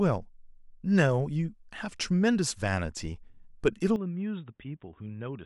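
It's a speech clip, and at 3.96 s it suddenly goes dull and boxy with no gap, nothing above 3.8 kHz, roughly 10 dB quieter, plus a faint new noise floor, right through to the end. That's most likely an input switched to a poorer device, like a narrowband headset mic.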